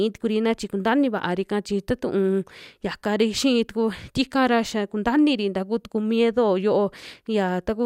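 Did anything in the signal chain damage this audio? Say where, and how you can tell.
No, nothing in the signal chain audibly damaged this speech recording. No stage from capture through to playback left any audible trace on the sound.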